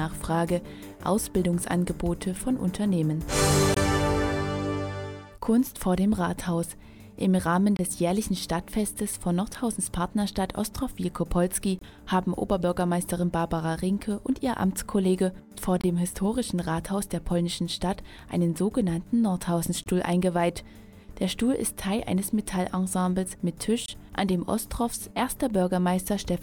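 Gap between chunks at 3.74, 7.77, 11.79, 15.81, 19.84 and 23.86 s: silent holes of about 23 ms join 4-second chunks, which fits codec padding, heard as short dropouts.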